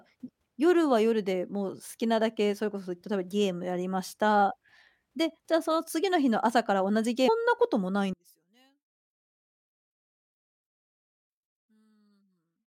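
At 7.27 s the speech jumps abruptly ahead, with a small blip at the join. This is likely a stream segment skipped, where one chunk failed to load and playback resumed at the next. A waveform shows a hard discontinuity, and a spectrogram shows a thin vertical click line.

From 8.13 s to the end, the speech collapses by about 38 dB into a faint remnant. The likely cause is one channel inverted in polarity, so centred content cancels when summed to mono. The waveform shrinks to a sliver, and the spectrogram fades.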